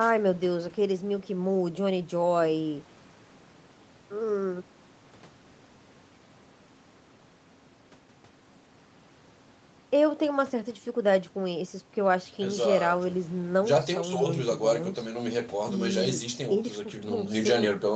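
No technical faults can be heard anywhere in the speech. It has passed through normal call microphone processing and an Opus call path, with nothing above 8 kHz, so the top end is limited in the way such a call connection limits it.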